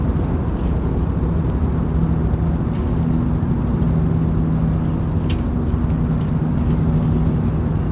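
At 1.5 s a skip ahead cuts out about a second of the sound, with no gap or fill. Unlike a dropout, nothing goes silent; the audio simply jumps forward. From 1.97 to 2.52 s a jitter buffer speed-up trims short pitch-period slices, about 40 ms in all, so the sound runs about 6% fast at unchanged pitch rather than skipping. Throughout, the narrowband call codec leaves nothing above 4 kHz.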